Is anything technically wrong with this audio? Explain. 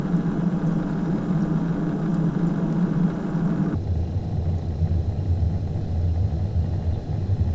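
Yes. A wrong sample rate from 3.75 s to the end: the samples play at half their intended rate, consistent with 32 kHz audio played at 16 kHz, so the sound runs at half speed, an octave lower.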